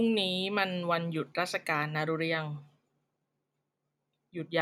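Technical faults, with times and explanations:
No technical faults can be heard in this speech recording.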